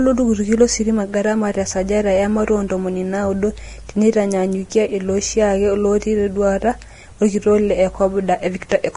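Throughout the speech, the damage points to Vorbis compression, likely run at a low quality setting, with the heavy coarseness fitting a bitrate of roughly 30 kbps. The encoder has discarded everything above 10.6 kHz and quantised the remaining treble so crudely that its fine detail has turned into noise of similar energy. The result is a hissy, grainy top end, roughened tonal sounds and softened, smeared consonant attacks.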